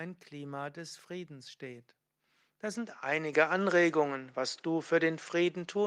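At 3.33 s the microphone volume is stepped up. The level rises by about 6 dB in a single jump, not a gradual ramp. The speech and the background noise behind it get louder together, at the same instant. That shared jump points to the input gain itself changing. The call software judged the microphone too quiet and raised the device's input volume in one move.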